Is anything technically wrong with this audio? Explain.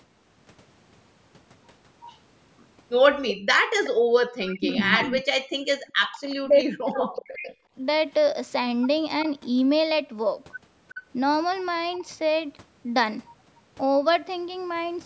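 Yes. The clip has three related faults, all pointing to a loudspeaker-side echo canceller struggling during the call.

Echo leak, at 2.02–2.18 s, 3.28–5.05 s, 7.18–7.52 s, 9.22–9.32 s, 10.95–10.99 s and 11.97–12.04 s. A second copy of the speech trails the original by 381 ms, likely because the far end's canceller failed to remove all of its loudspeaker output picked up by its microphone and returned it. Half the fragments sit low, around 25 dB under the speech, but the long stretch from 3.28 s rises to within about 5 dB.

Background gated by the echo canceller, from 3.34 to 4.12 s. While the loudspeaker output was playing, the canceller clamped the microphone down hard to block echo, dropping the room sound by as much as about 40 dB. It behaves like a gate: for roughly half a second in total the ambience vanishes in dips, then returns as soon as the canceller releases its hold.

Speech suppressed in double talk, from 4.48 to 7.53 s. 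Both parties were speaking together here, likely leaving the canceller unable to tell the local talker from the loudspeaker echo, so it attenuated everything. Across about three seconds the talker's voice sinks, at worst by around 40 dB, breaking up and fading in pieces while the other side talks, overlapping the strongest echo bursts.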